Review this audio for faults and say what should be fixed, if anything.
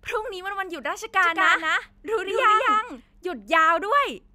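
Doubled audio track, 1.23 to 3.01 s: a dry speech copy trails 200 ms behind, about 5 dB down, likely from a slower capture path. Route each source through a single capture path and monitor for duplicate inputs before recording or exporting.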